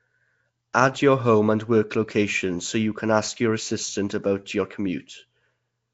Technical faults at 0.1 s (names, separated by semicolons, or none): Nellymoser compression